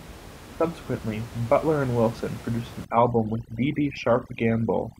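Speech runs over a room-noise bed sitting about 17 dB below the voice. From 2.85 s to the end at 5.00 s, that background suddenly drops and breaks up into twinkling, chirpy specks. This is overdone noise removal. A noise reducer set far too strong is pushing individual frequency bands down or off whenever they come close to its noise estimate, and the quieter parts of the voice are being cut along with the room sound.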